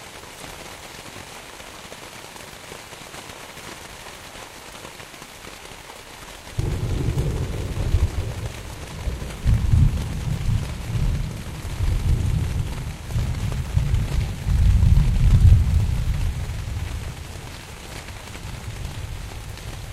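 Digital radio blending to analogue, 11.20 to 13.07 s: the receiver lost digital reception and cross-faded over 188 ms to FM, bringing faint hiss, roughly 40 dB down.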